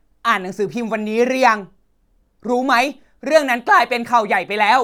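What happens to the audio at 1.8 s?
Nothing goes wrong at 1.8 s; the speech runs through that moment intact, with no dropout, click, distortion or glitch.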